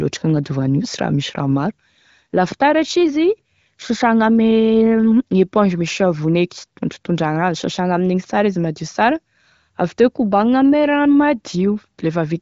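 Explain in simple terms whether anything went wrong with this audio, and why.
Nothing went wrong that I could hear: this speech, carried over an HD Voice phone-style link, raised no problems on listening.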